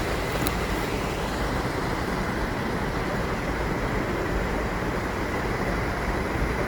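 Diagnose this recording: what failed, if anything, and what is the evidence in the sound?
At the codec stage, the sound is grainy and rough throughout, with tonal parts turned noisy but no swirling holes, and content still extends to 20.2 kHz. That points to Opus compression, likely at a low rate around 24 kbps, filling starved bands with folded energy or noise.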